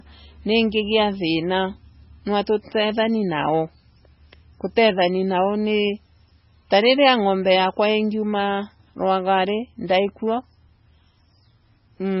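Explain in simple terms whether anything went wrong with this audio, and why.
The speech sounds watery and swirly from start to finish, with nothing above about 5.6 kHz, so s sounds come out dull and metallic. That is heavy damage, likely from MP3 compression squeezed too hard: to save data, it discarded the treble and faint detail.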